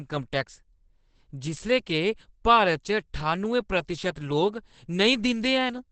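A short speech recording with a dull, boxy top end and a hoarse grain on every syllable, from start to finish. Nothing comes through above about 8.5 kHz, so sibilants lose their bite. That narrowed band and rasp point to heavy Opus compression, likely in its SILK speech mode at wideband, which models the voice rather than keeping the waveform, and the damage level fits a rate of around 12 kbps.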